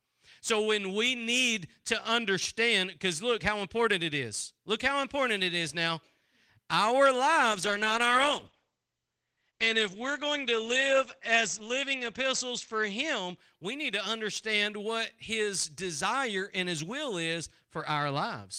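In this speech clip, a call bitrate drop from 7.52 to 13.43 s cuts the encoder's budget, pointing to about 32 falling to 12 kbps, so speech turns coarse and watery, with highs capped near 8 kHz instead of 20 kHz, recovering before "we need to understand".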